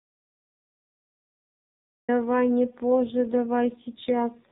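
From the first instant to 2.09 s there is only silence. It is an audio dropout to silence, already under way when the clip begins. No room tone or hiss fills the gap, just silence. The input was likely lost through a disconnected device, a failed link or a mute, while recording carried on. Whatever speech fell in those two seconds is gone. The sound then enters abruptly.

At 2.21 s an AMR rate drop sets in and lasts to the end, at 4.52 s. The network has pushed the codec to a lower rate to spend bits on error protection. The roughness points to a fall from 12.2 kbps to 5.9 kbps. The 4 kHz band limit of the AMR-NB narrowband path is unchanged, and there is no gap. The speech simply turns buzzier and more synthetic, with a coarse, vocoded edge.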